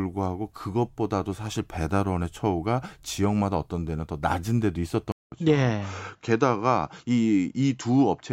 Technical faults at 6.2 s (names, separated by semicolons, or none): input switched to a poorer device